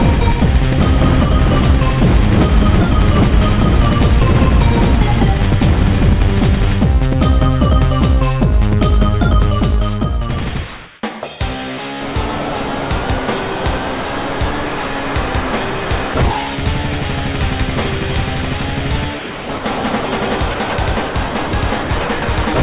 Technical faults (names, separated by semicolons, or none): comfort noise in place of the background; sound chopped by the voice detector; sound dropped by the voice detector